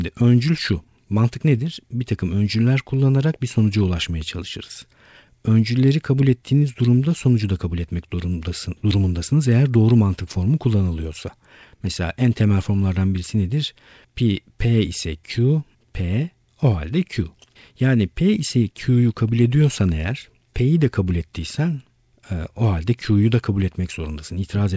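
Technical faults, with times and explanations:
Throughout: clock drift between sender and receiver. The sending side's audio clock runs roughly one and a half percent slow against the receiver's, so audio reaches the jitter buffer a little slower than it is played out. The buffer keeps draining, and the receiver has to stretch the audio or briefly run short. This leaves small, irregularly spaced timing hiccups across the whole clip rather than one clear break.
0.22 to 24.57 s: repeated timing corrections. To keep up with the slow sender, the receiver repeatedly repeats short slices of audio, always lengthening, never cutting. Together they add something like 400 ms over the span and leave the speech running at about 99 percent speed. Each insertion is tiny and unevenly spaced, so it comes across as faint stutters and a slightly unsteady, dragging tempo. The call path's G.722-like band limit, with nothing above 8 kHz, is heard alongside.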